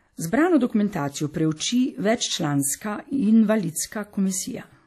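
All the way through, the speech carries plainly audible codec damage, most likely WMA compression at a low rate, around what you'd expect from a 48 kbps stream. Long transform blocks smear the quantisation noise, so it rings and washes, with hiss breathing along, and nothing survives above 14 kHz.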